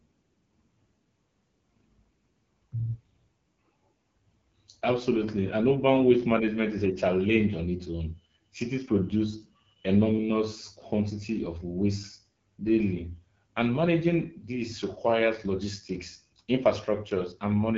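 AMR wideband (HD Voice) codec artefacts run throughout: speech is rebuilt from pulses, with noise filling above 6.4 kHz and nothing above 7.5 kHz. The plainly raspy texture points to a low 8.85 kbit/s mode.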